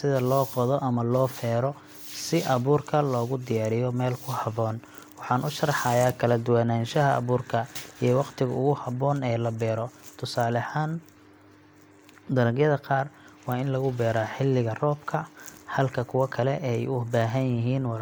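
Nothing goes wrong anywhere in this bit of speech; there's simply no technical fault to point to.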